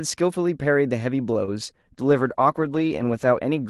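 Speech over a WebRTC call path using Opus, with a 12 kHz audio bandwidth. At about 1.33 to 1.37 s there is a short stall from a late packet: the sound is held for about 18 ms and then resumes where it left off, with nothing lost. At 1.45 to 1.49 s a short concealed packet loss leaves a brief smear in its place. Unlike the stall, about 20 ms of real audio is actually gone here. From 1.95 to 3.37 s a call bitrate drop makes the speech rough and muffled. This is a sustained change lasting over a second, not a momentary glitch, and it fits the encoder falling from 32 kbps to about 13 kbps.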